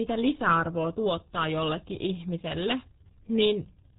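A short speech clip carrying the RealAudio 14.4 codec throughout: nothing above 3.8 kHz survives, and heavy codec damage leaves the voice muffled and gargly, consistent with an 8 kbit/s dial-up stream. Plain telephone band-limiting would sound dull but clean, without this bubbling, gargled texture.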